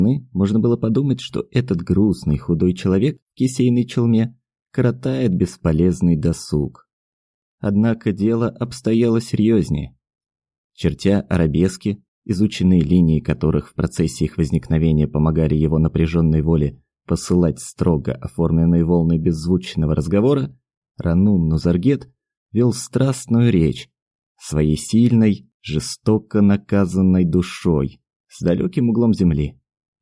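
No technical faults can be heard anywhere in the recording. There is nothing to point to at any moment, so no timestamps apply.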